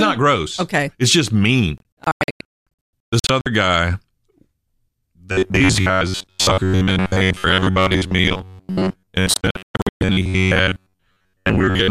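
Just after "just mean", from 1.78 to 3.46 s, the speech breaks into a cluster of short silent holes, about a second of audio missing in total across 1.68 s, the longest gap lasting 216 ms. This is a digital broadcast dropout: frames arrived damaged or not at all, the receiver muted each time until clean frames resumed, and whatever was transmitted during those gaps is gone.

From 5.32 s to the end at 11.9 s, the voice hardens into a rigid metallic buzz near 93.8 Hz that only loosely tracks the speech. This is robotic sound from repeated short buffers, likely caused by audio arriving too slowly, so the player loops the last fragment, around 10.7 ms given that buzz pitch, for most of the stretch while the real audio is skipped.

Inside that buzzing stretch, from 9.34 to 10.02 s, a second digital broadcast dropout punches further holes, about 0.4 s lost across 0.67 s, the longest silence 120 ms.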